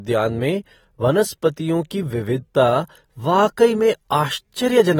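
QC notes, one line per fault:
Throughout, AAC compression: the speech was likely coded with AAC-LC at a low rate, where coarse quantisation of each frame's spectrum against a hearing model leaves plainly audible damage, a smeared, warbling, fizzy texture on sustained sounds and sibilants that fits about 48 kbps.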